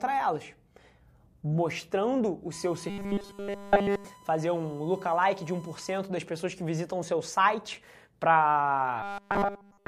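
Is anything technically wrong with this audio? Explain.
Yes, there are two faults. From 2.52 to 5.99 s, just before "das pessoas que visitam", a USB whine sits under the speech as a steady 1 kHz tone, about 25 dB below the signal. The USB bus pulls current in 1 ms frames, and that periodic draw leaks into the audio through shared power or ground, giving a 1 kHz tone. Unlike mains hum, it is a high, thin whistle whose pitch never shifts.

From 2.90 to 4.05 s, overlapping the whine, and again from 9.02 to 9.88 s, the speech turns into a robotic sound from repeated short buffers: a rigid, metallic buzz at 200 Hz that still roughly tracks the speech. The likely cause is audio arriving too late, so the playback side loops the last 5 ms instead. That repetition imposes the 200 Hz pitch, and essentially all of the real audio in these stretches is lost. The whine is a separate tone on top of the speech, but this buzz replaces the speech itself.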